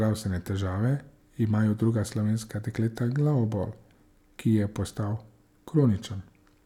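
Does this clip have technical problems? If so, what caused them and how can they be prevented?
No, there are no technical faults to report in this speech recording, so no cause to trace and no preventive step is needed.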